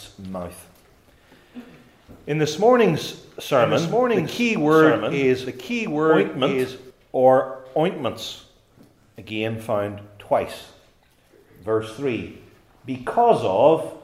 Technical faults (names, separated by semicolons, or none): doubled audio track